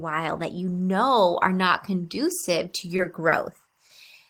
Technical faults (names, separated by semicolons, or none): timecode bleed; short stall from a late packet